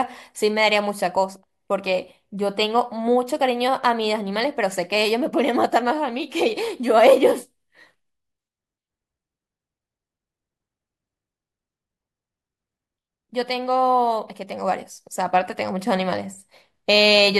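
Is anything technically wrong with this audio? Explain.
No, nothing technically wrong here.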